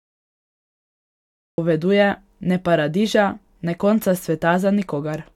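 From 0 to 1.58 s there is only digital silence, and at 1.58 s the speech enters abruptly, already partway through a sound. This is a cut-off start: capture or streaming began late, so the opening of the utterance was never recorded and the first audible material is whatever was arriving at that instant. There is no natural onset or fade-in. The signal jumps straight from dead silence to full-level speech.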